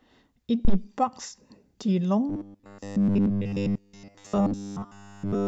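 At 0.65 s a phantom power thump runs to about 0.79 s. A supply was switched on or off on a live input, and the voltage step passed through the coupling capacitors as a deep thud that dies away within about 31 ms. On the waveform it shows as a single large, lopsided excursion that settles quickly. On the spectrogram it is a short, dark smear concentrated in the lowest frequencies.

From 2.29 s to the end of the clip, essentially all of the speech is replaced by robotic sound from repeated short buffers. The voice becomes a stiff, metallic buzz locked at 100 Hz that still roughly follows the syllables. The likely cause is audio arriving too seldom, so the software loops a 10 ms fragment of the last audio while the real signal is skipped. The spectrogram shows rigid horizontal harmonic lines spaced at 100 Hz, and the waveform shows an identical short pattern repeating.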